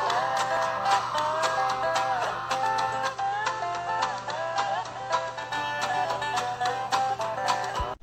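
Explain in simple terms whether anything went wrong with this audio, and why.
From 2.96 to 5.59 s the sound turns quieter and faintly hissy: digital radio blending to analogue, as the receiver briefly fell back to FM.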